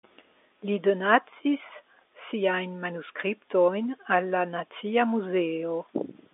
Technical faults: none

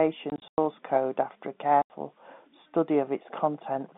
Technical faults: packet loss filled with silence

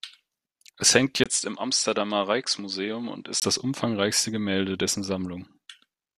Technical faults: input switched to a poorer device

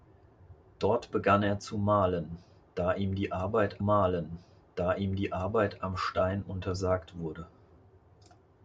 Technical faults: stream segment repeated

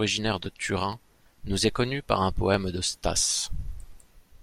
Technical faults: dropped samples

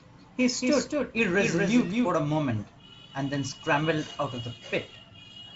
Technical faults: doubled audio track

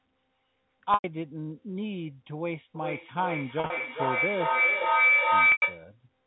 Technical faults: packet loss with pitch repetition; feedback howl

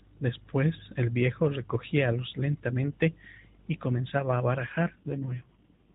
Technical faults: AMR rate drop

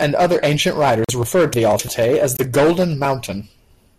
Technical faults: corrupt frame muted; chunks out of order

